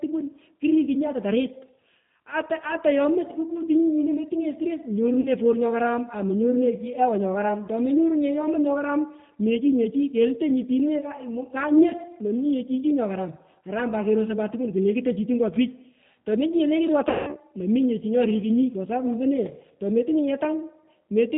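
The whole clip of speech runs through a G.729 codec, which fits an 8 kbit/s VoIP link. Nothing above 4 kHz survives, so it's muffled, and the pulse-built excitation gives the voice a plainly audible rough, slightly synthetic edge.

At 5.21 to 5.29 s there's VoIP packet loss concealed by the speech codec. About 40 ms went missing, which fits two lost packets. The decoder stretched its last pitch and filter into a short smear that fades. At 17.09 to 17.38 s a bigger gap hits, about 180 ms, which points to nine packets. The sound smears and decays, and the voice stays weak or distorted as it comes back into "mominye chi nyorikunyi kwa".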